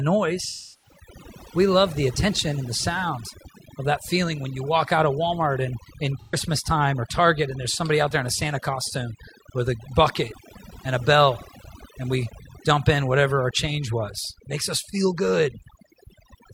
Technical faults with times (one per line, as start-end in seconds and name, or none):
0.00-16.54 overdone noise removal
0.42-0.98 AAC frame loss with concealment
6.21-6.36 AAC frame loss with concealment